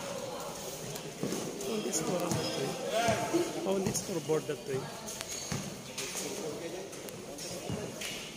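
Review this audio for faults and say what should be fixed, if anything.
Bit error spikes: isolated sharp ticks at 0.96, 2.20, 3.96, 5.21, 7.09 and 8.05 s, peaking near about -11 dBFS (about -17 dBFS for the last). Each tick is a flipped bit that throws one sample, or a few, off by a power of two before snapping back. Use error-checked memory and a link with CRC or parity to stop these.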